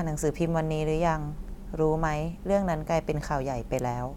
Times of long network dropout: none

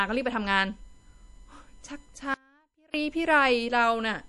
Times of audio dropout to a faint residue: 2.34-2.94

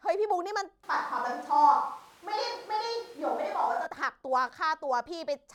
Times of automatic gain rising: none

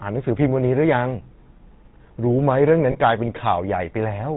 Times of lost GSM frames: 2.92-2.97

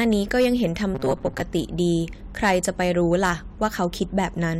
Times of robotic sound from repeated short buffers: 0.95-1.43

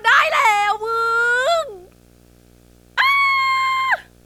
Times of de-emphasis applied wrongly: none

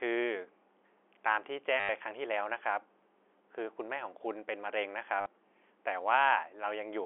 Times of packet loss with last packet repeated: 1.80-1.89, 5.21-5.26

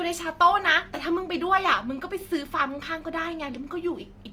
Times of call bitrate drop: none

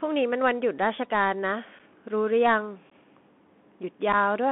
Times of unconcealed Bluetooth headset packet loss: 1.79, 2.90-2.92, 4.12

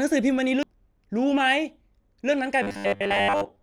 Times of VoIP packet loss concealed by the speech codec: none

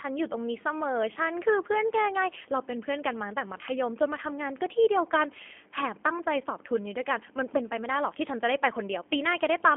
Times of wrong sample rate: none

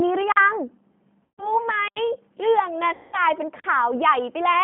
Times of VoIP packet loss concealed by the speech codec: 1.24-1.61, 2.93-3.17

